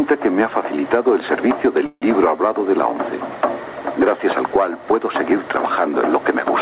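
Gain pumping runs through the whole clip, with the level swinging by around 10 dB. Loud and quiet parts sit close together. The likely cause is input gain set far too high, with a fast limiter pulling it down.

At 1.86 s a call audio freeze begins and lasts until 2.04 s. The last sound is stretched into a fading buzz or hiss, then about 60 ms of silence. The likely cause is delayed packets emptying the jitter buffer. Playback then resumes where it stopped, so nothing is lost, only 156 ms of delay added. The narrow call sound, with nothing above 4 kHz, carries on around it.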